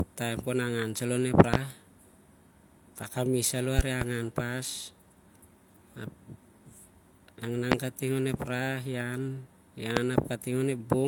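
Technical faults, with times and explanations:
Throughout: low-bitrate audio saved at a high bitrate. Nothing is present above 18.5 kHz, and the leftover artefacts point to an earlier low-rate encoding, such as HE-AAC near 40 kbit/s. The likely cause is a later MP3 re-encode near 192 kbit/s. That cannot restore what was removed first.
1.54 to 1.57 s, 3.79 to 4.05 s, 7.72 to 7.75 s, 9.97 to 10.00 s: loud pop. Sharp pops stand about 20 to 25 dB above the speech, which continues underneath. The 3.79 s event is a double pop. A likely voltage step from a plug, switch or static causes each one.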